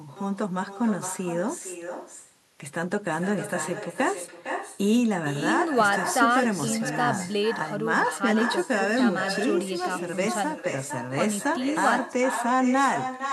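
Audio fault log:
throughout: echo with no canceller, a thinner copy of the speech returns about half a second late, about 8 dB down; spectrogram shows weaker delayed duplicate harmonics.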